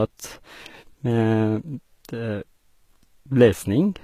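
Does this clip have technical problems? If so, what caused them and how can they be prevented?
Yes. Throughout the speech, the treble sounds bright but synthetic. Sibilants come out gritty and lispy, and the top edge has a metallic sheen. Nothing is heard above about 14.9 kHz. The damage is plainly audible, and the likely cause is HE-AAC compression. At a very low rate, consistent with roughly 20 kbps, the codec keeps only the lower spectrum. It rebuilds the highs by copying lower bands upward under a coarse envelope, so the harmonics no longer line up. To prevent this, encode speech at a higher bitrate with plain AAC or Opus instead of relying on band replication.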